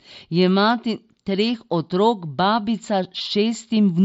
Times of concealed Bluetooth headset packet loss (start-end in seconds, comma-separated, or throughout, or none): 3.18-3.20